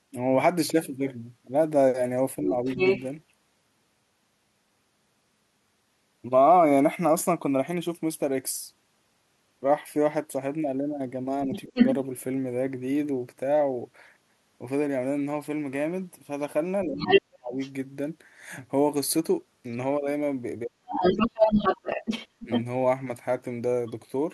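At 2.42 to 2.55 s the talker's speech dips by a few dB, while from 2.47 to 3.03 s a second voice comes through at roughly the talker's own level. Both faults return together at 11.46 to 11.78 s (dip near 25 dB, second voice 11.53 to 11.93 s), 16.85 to 17.6 s (the deepest, around 40 dB, second voice 17.0 to 17.71 s), and 20.64 to 22.5 s (second voice 21.01 to 23.92 s).

The dips are speech suppressed in double talk. With both sides talking at once, the echo canceller likely could not separate the local talker from the loudspeaker echo and turned the whole signal down. Each dip begins shortly before the second voice appears.

That second voice is the other side's voice leaking through, likely the far end's playback reaching the microphone unremoved. It sits at about the talker's level, or slightly louder. Other crosstalk would not be tied to the ducking, but this voice overlaps the stretches where the talker is pushed down.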